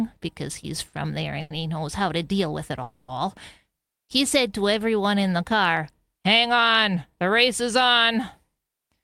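Short stalls from a late packet occur at 0.87 s after "because he's" and 1.41 s before "he knows how to". The jitter buffer ran dry, so the last sound was held for 60 and 90 ms before resuming, with nothing lost.

A call audio freeze follows at 2.82 to 3.11 s, after "to deal with it". It is likely from packets delayed in transit. The sound stretches into a fading buzz for 260 ms, then carries on intact, later than before.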